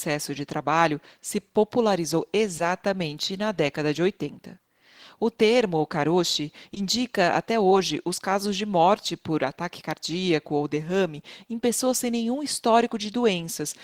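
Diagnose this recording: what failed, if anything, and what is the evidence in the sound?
Network stage: short concealed packet loss. Brief smears at 1.40–1.42 s after "de trabalho se", 2.57–2.60 s, 6.74–6.77 s after "termo karoshi", and 7.70 s. Late packets were replaced by extended sound.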